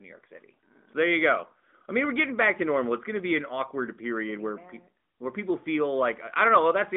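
Nothing goes wrong anywhere in the speech here, so there's no fault to point out.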